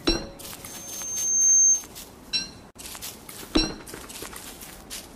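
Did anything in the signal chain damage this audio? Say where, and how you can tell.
Yes. From 0.65 s to 1.88 s a loudspeaker feedback squeal rises at 6.4 kHz. It arises in the acoustic and analogue stage, where a microphone picks up a loudspeaker it is feeding. At 6.4 kHz the loop gain exceeded one, so that tone fed on itself and swelled over roughly a second to about 15 dB above the wanted sound. Electrical whine or interference would sit at a fixed level from the start. This tone grows by itself, which marks it as feedback.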